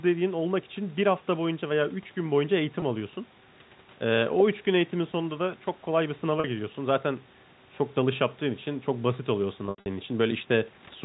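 Packet loss with pitch repetition occurs at 2.80 to 2.82 s, 6.40 to 6.44 s, and 9.66 to 9.86 s. The receiver repeats the last pitch period to fill each gap. The first two, about 20 ms and 40 ms long, sound like a briefly held, buzzy note. At 9.66 s the loss is scattered across 200 ms, with gaps as long as 80 ms. These fade toward silence before the speech cross-fades back in.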